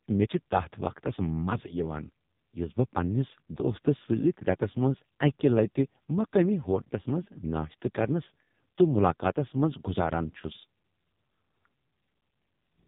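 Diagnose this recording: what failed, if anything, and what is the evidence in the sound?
Codec stage: AMR narrowband mobile codec throughout; a few-pulse vocal-tract model leaves speech buzzy and synthetic, fitting about 5.15 kbps; spectrogram blank above 3.8 kHz.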